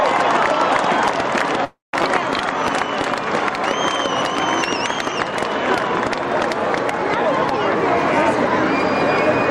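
At 1.64 s the stream most likely stalled: packets were held up in transit, the jitter buffer ran dry, and the receiver had to invent sound to cover the wait. This call audio freeze lasts until 1.94 s, about 0.29 s in all. The last fragment is stretched into a brief fading buzz that drops to silence for about 170 ms. Playback then resumes where it stopped, so nothing is lost, only pushed later.

At 2.02 s, just after the freeze, the opposite happens. With the backlog now queued, a stretch of audio is dropped, either in transit or by the overflowing buffer, cutting the added delay back down. This skip ahead removes about a fifth of a second of sound. The two sides are spliced together with only a tiny filler of a few milliseconds, so the audio jumps forward abruptly rather than pausing.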